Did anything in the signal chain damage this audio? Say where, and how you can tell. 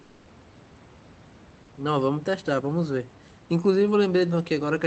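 Yes, at the codec stage. From 0.01 to 0.25 s, the room's background becomes comfort noise in place of the background: a steady, featureless hiss about 1 dB quieter, without the real room noise's texture. Likely Opus discontinuous transmission, with the receiver synthesising noise for those 240 ms.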